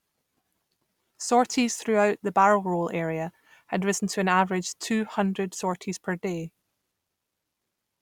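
No technical faults are audible.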